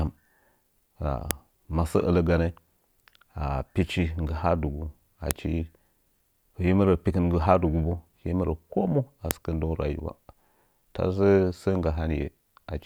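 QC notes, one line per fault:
1.31, 5.31 and 9.31 s (the last between "mu a" and "sɨkə ndəngu"): file header played as audio. The speech was joined from 4.0 s WAV pieces without removing their headers. Those header bytes play as samples, giving a sharp, loud snap at each join.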